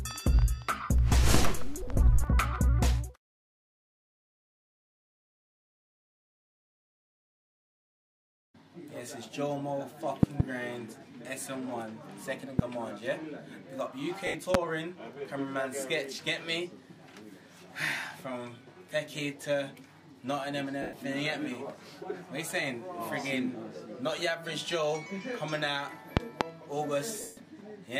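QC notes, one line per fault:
1.34–1.37 s, 10.23–10.43 s, 12.59–12.62 s, 14.54–14.57 s, 26.17–26.43 s: loud pop. Each one is a sharp crack sitting on top of the sound, which keeps going underneath. The ones at 10.23 and 26.17 s are doubles, two hits in quick succession. They peak at roughly 20 to 25 dB above the audio. That's a sudden voltage jump, likely from a plug, switch, static or a driver hiccup, which the downstream circuitry shapes into a thump.
14.27–14.34 s, 20.82–20.93 s, 27.21–27.37 s: lost LE Audio frames. These gaps run about 70, 110 and 160 ms, which fits a run of dropped 10 ms frames each time. The LC3 decoder covers the holes by replaying the last spectrum with scrambled phase. Anything tonal turns into a hissy smear for the first few frames, then fades. On the longest dropout, at 27.21 s, it sinks toward silence before the sound comes back.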